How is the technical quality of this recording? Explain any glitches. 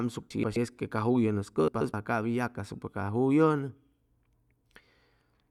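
The recording has two glitches, both frames out of order: from 0.30 to 0.56 s and from 1.68 to 1.94 s. In each, two adjacent blocks of about 128 ms (which fits runs of four frames) were decoded in swapped order, so the speech there plays its halves back to front with no time lost. It sounds like a brief garbled flutter. A spectrogram shows abrupt vertical discontinuities at those joins, and the waveform shows step changes in envelope.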